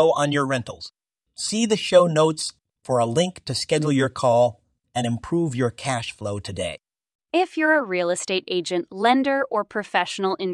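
No audible faults occur anywhere in the recording; nothing stands out that calls for remedy.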